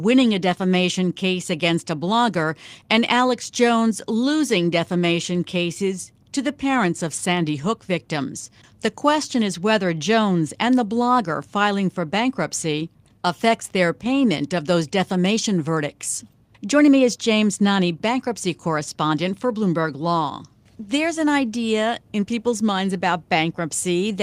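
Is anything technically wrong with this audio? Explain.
No, nothing technically wrong can be heard here.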